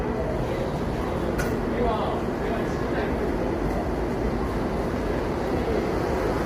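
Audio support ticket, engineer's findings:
Low-delay AAC compression, throughout the clip. Rough, grainy texture with noise filling gaps between tonal components; top band dulled and partly synthetic. Heavy damage. Likely AAC-ELD encoding: short frames blur fine frequency detail and consume bits, leaving noisy gaps and a band-limited, synthesized top. Degree of roughness fits a bitrate near 24 kbps.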